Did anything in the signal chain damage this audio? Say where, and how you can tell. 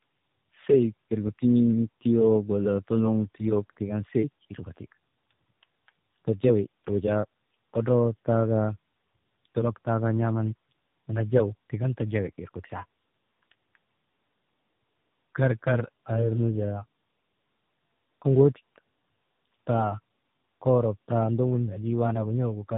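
Yes. The damage sits at the codec stage and runs through the whole clip. This is tandem speech coding. The speech crossed a chain of G.729A at 8 kbit/s, G.711 A-law, then AMR-NB at 10.2 kbit/s. That is two low-rate speech coders in a row, with each one re-coding the other's output. Their errors stack. The sound is rough and warbly, and muffled, with nothing above about 3.7 kHz.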